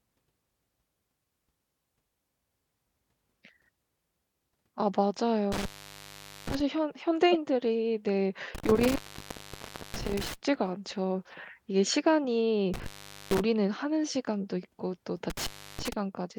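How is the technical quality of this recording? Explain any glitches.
The speech recording has two kinds of fault: repeated dropouts from a bad connection and one short digital glitch.

Intermittent contact at 5.52–6.60 s, 8.55–10.35 s, 12.74–13.40 s and 15.30–15.93 s: a loose plug or cable opens, cutting the sound with crackle for about 0.82, 0.99, 0.45 and 0.32 s.

Corrupt frame decoded at 7.32–7.37 s: damaged bits in a couple of compressed frames were played anyway, producing a brief glitch of misplaced frequency energy peaking around -15 dBFS.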